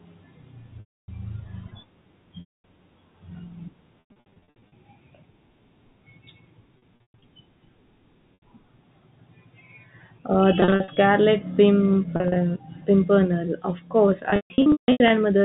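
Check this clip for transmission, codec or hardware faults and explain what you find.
Repeated packet loss with pitch repetition runs through the whole speech clip, carried over the G.711 telephone path with its 4 kHz band ceiling. It hits at 0.8–1.08 s, 2.4–2.64 s, 4.0–4.72 s, 6.78–7.22 s, 8.34–8.42 s, 10.6–10.96 s, 12.16–12.36 s and 14.3–15.1 s. Each time, audio went missing and the receiver looped the last pitch period to fill the hole, fading it out. The short 80 ms drop sounds like a briefly held, buzzy tone. The longer gaps, from 240 ms up to scattered losses totalling 500 ms with runs as long as 160 ms, fade into silence before the speech returns through a quick cross-fade.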